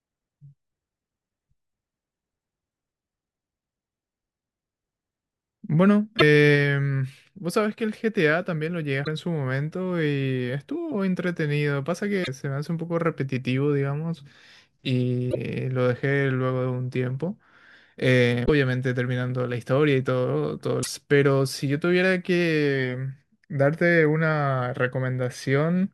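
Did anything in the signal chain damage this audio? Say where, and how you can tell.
Yes. The damage is at the codec stage. Brief garbled bursts at 6.18, 9.04, 12.23, 15.30, 18.45 and 20.82 s last 40 to 54 ms, about two 24 ms frames each. This is likely a broken MP3 bit reservoir: frames after a cut look back for borrowed bytes and find another frame's data.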